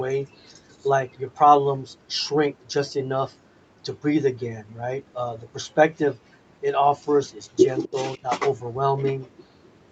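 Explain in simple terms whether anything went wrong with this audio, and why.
Echo leak, at 7.83 to 7.89 s: a faint scrap of the speech returns a quarter-second late, likely because the other side's loudspeaker sound reached their microphone and was sent back.

Speech suppressed in double talk, at 8.15 to 8.27 s: the speech nearly vanishes for about a tenth of a second, likely because the echo canceller muted everything while both sides talked at once.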